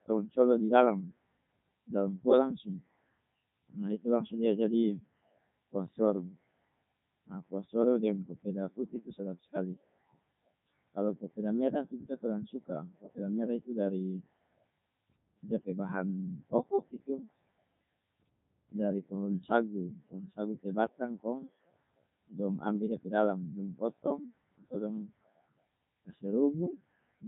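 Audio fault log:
Throughout: Codec 2 vocoder. The speech sounds robotic and buzzy, with a synthetic, metallic edge, and nothing is heard above 3.8 kHz. Damage is heavy. Rather than keeping the waveform, the codec sends only pitch, voicing, energy and a rough spectral envelope, then rebuilds the voice from a bank of sine waves. The result fits Codec 2's 3.2 kbit/s mode, its richest setting, yet the original texture is still lost.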